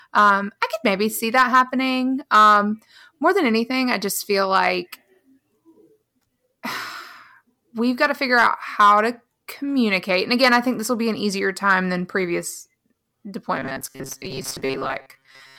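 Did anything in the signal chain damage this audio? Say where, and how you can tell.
Yes. Hard clipping runs through the whole clip. The signal is driven about 5 dB past what a stage can pass, probably the converter or a sample-format conversion. Only a small fraction of samples hit the ceiling. The peaks are cut flat, and the flat tops add harmonics high in the spectrum. That is heard as brief crackle on the loudest speech peaks rather than constant fuzz.

From 13.57 s to the end at 15.59 s, the speech turns into a rigid, metallic buzz at 134 Hz. This is robotic sound from repeated short buffers, at the driver or buffer stage. The likely cause is audio arriving too seldom, so the software repeats the last stretch in its place. The buzz frequency fits a repeat length of about 7.5 ms. Most of that final stretch is repeated audio, not new signal.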